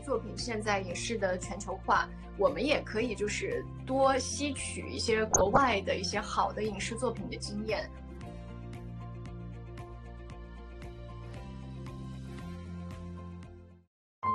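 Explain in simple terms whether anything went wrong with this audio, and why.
Yes, two things went wrong. Throughout, the sound is dull, with a gurgling, grainy edge. This is likely MP2 compression squeezing it too hard, switching off upper frequency bands.

From 5.31 to 5.72 s there is DAB burbling: bubbling, squelching chirps. Reception errors slipped past error correction and briefly corrupted parts of the sound.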